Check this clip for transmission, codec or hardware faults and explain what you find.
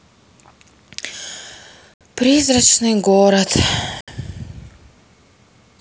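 Gap between chunks at 1.94 to 2.01 s and again at 4.01 to 4.08 s: the speech arrives in 2.0-second blocks, and each join has an added stretch of silence of about 69 ms, as padding or a late start inserts dead time before the next block plays. Nothing is dropped, but the flow is broken at each boundary. Each gap sounds like a brief hole, and the two fall at a steady spacing.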